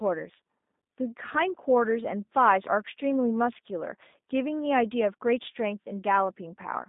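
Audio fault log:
Throughout, G.729 codec: speech sounds rough and synthetic and nothing gets past about 3.8 kHz, which fits 8 kbit/s G.729 rebuilding each frame from a few pulses.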